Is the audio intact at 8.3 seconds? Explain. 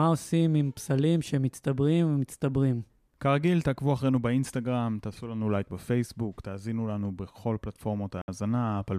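Yes, but only just: a Bluetooth dropout silences the audio from 8.21 to 8.28 s, and the sound resumes at 8.28 s, slightly before 8.3 s. Packets likely failed to reach the headphones in time, losing about 64 ms, which fits roughly three dropped packets. Playback continues as though it had run on through the gap. A waveform shows a flat line, and a spectrogram shows a blank vertical band across all frequencies.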